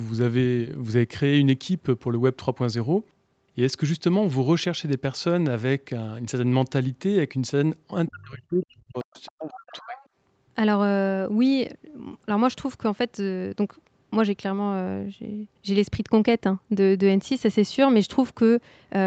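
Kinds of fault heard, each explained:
Dropped samples: Twice, the waveform jumps abruptly from one value to a later one. Each jump is a single sharp click, at 3.06 s and at 9.00 s. The missing stretch is only a fraction of a millisecond, far too brief to remove any sound. Only the discontinuity is heard. The likely cause is a few samples lost in the stream, perhaps in a buffer hand-off. Each click shows as a thin vertical line across the spectrum.
Speech suppressed in double talk: From 8.08 s to 10.01 s the level drops in pieces, about 1.5 s in total. At its deepest the drop is about 40 dB, close to silence. The likely cause is both sides talking at once. The echo canceller then could not tell the talker from the loudspeaker echo, so it turned everything down.
Other side's voice leaking through: A second, fainter voice appears in two scraps. The first, from 9.14 s to 9.27 s, sits about 35 dB below the main speech. 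The second, from 9.58 s to 10.06 s, is stronger, about 20 dB below. The likely cause is the far side playing on the talker's loudspeaker. The echo canceller did not fully remove it from the microphone. Both scraps begin within the suppressed stretch.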